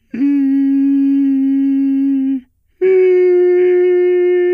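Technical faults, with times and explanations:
Nothing here needs flagging: the music runs along without any technical trouble worth pointing out.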